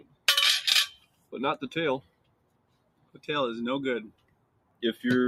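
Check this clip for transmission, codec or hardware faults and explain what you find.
A speech-oriented processing fault runs through the whole clip.

Noise suppressor applied to music or sounds, throughout: a suppressor tuned for speech keeps misjudging this material, treating sustained, steady content as background noise and pulling its gain down, then releasing when something sharper arrives. The level swings by roughly 20 dB as it does so. Onsets come through, but anything held or decaying sinks and thins, giving an audible pumping, fluttering quality across the sound.

Sound cut by the noise suppressor, at 0.00–0.27 s, 0.98–1.32 s, 2.02–3.21 s and 4.10–4.82 s: in these stretches the suppressor cuts harder than elsewhere, with drops of about 14 to 15 dB. The longest lasts about a second from 2.02 s. The sustained parts and tails are chopped short and fall away abruptly, while the sudden attacks around them survive largely intact.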